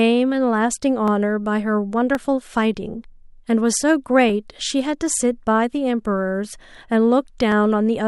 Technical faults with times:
1.08-7.52 clock drift buffer slips

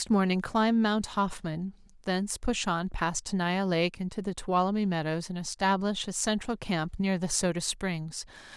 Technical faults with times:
none

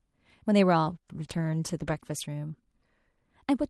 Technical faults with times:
0.83-2.31 call bitrate drop

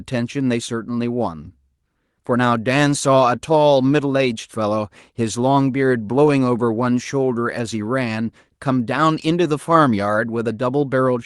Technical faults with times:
none

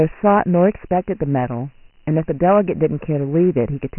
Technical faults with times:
0.00-3.99 Dialogic VOX ADPCM

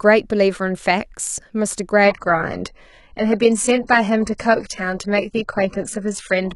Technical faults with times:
2.05-6.55 adaptive stream at a lower bitrate

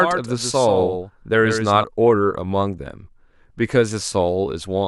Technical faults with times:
0.00-1.84 doubled audio track

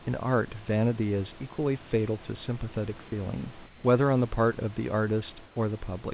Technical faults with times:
3.66-3.84 comfort noise in place of the background
5.46-5.56 comfort noise in place of the background

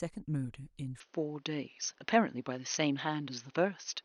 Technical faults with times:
1.00-4.04 input switched to a poorer device

